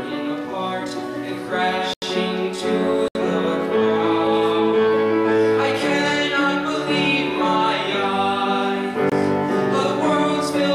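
At 1.94 to 2.02 s, 3.08 to 3.15 s and 9.10 to 9.12 s the audio drops to a block of digital silence, likely where output samples weren't delivered in time. Each hole cuts out and back abruptly, unlike a fade or concealed dropout. The last, about 23 ms, fits a 1024-sample buffer.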